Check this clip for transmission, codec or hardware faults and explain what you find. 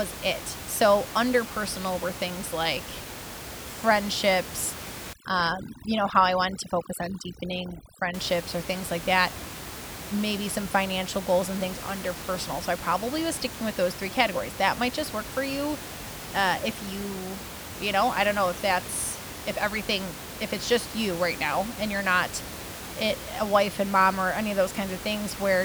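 One fault stands out: overdone noise removal from 5.13 to 8.14 s. A noise reduction stage set far too aggressively drives individual frequency bands down toward silence whenever their level comes close to its noise estimate. Because the room noise sits only about 12 dB below the speech, quieter speech components fall into that range and are cut along with it. The background drops and breaks up into twinkling specks.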